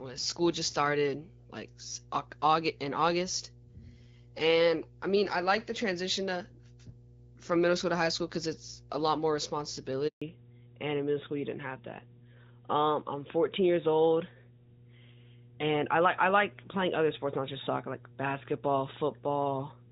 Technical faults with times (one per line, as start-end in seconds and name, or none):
0.00-19.91 mains hum
10.08-10.22 handover gap
10.22-19.91 fallback to narrowband